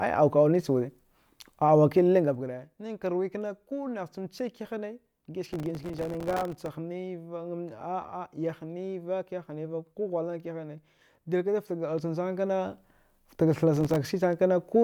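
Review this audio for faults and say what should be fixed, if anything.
Zipper noise: From 2.06 to 2.55 s the speech drops by about 10 dB with a fast, fine ticking, roughly 40 ticks a second. From 11.62 to 13.02 s it rises by about 10 dB with a slower zipping, around 15 per second. The gain moves in unsmoothed steps, and each step puts a small click into the waveform. To prevent it, ramp gain per sample or interpolate across each buffer.

Processor overload crackle: From 5.47 to 6.68 s a dense, gritty tearing rides over the speech. A much shorter burst follows at 13.76 to 13.96 s. The processor is missing its deadlines for very small buffers, which fits buffers of about 1.5 ms. Each miss drops in a sliver of silence with hard edges. On the order of a hundred such gaps occur in the first burst and a dozen or so in the second. To prevent it, use larger buffers or reduce the processing load so every deadline is met.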